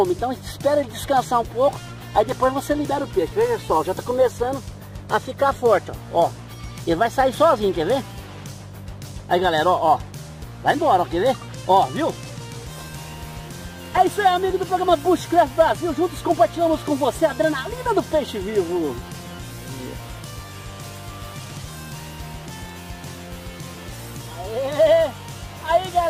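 At 13.97 s there is an underrun with held sample. The output buffer ran dry for about 2.7 ms, or 128 samples. The waveform freezes flat at its last value. Playback then resumes where it paused, so only a faint tick sounds.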